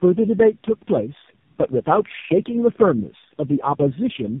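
From start to end the speech carries tandem speech coding: nothing remains above 3.6 kHz, and the voice sounds rough, muffled and warbly. This fits three speech coders in a row, ending in narrowband AMR, each re-encoding the previous coder's degraded output.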